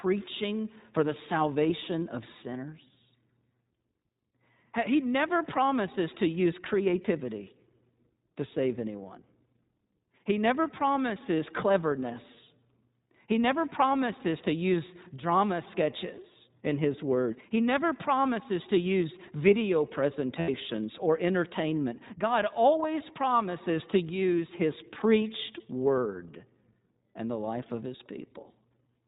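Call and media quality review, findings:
iLBC codec, whole call: narrowband speech, clearly rough and synthetic. Band-limited coder, probably iLBC in its 20 ms mode, codes each frame's excitation independently. Spectrogram shows nothing above 4 kHz, a hard ceiling; harmonics look smeared and grainy.

Lost iLBC frames, 20.40–20.50 s, between "promises to use video" and "or entertainment": a gap of about 80 ms (roughly four 20 ms frames) where the decoder repeats the last pitch cycle mixed with noise, producing a held, buzzy vowel. The waveform shows flat periodic repetition; the spectrogram shows static striations. Speech recovers at once.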